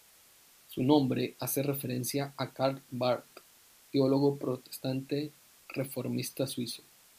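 From start to end, the speech carries low bit depth with dither: a steady, even hiss sitting roughly 30 dB below the voice, which fits 8-bit samples with dither added before rounding. The dither converts the rounding error into constant white noise, so the hiss stays the same through pauses and loud syllables alike. Undithered truncation would instead produce gritty distortion that follows the speech and drops out in silence.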